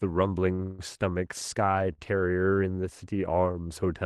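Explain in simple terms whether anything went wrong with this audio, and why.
Two short stalls from a late packet occur, at 0.55 to 0.61 s and 1.93 to 2.00 s. Each time a packet arrived late, so the receiver held the last bit of speech for about 32 ms and then 54 ms, giving a brief stretched sound with a slight buzz or dip. Nothing is lost.

A call audio freeze follows at 0.63 to 0.81 s. The speech stops moving and the last sound is drawn out as a fading buzz or hiss for about 160 ms, without going fully silent, then continues from where it stopped. The likely cause is packets held up in transit.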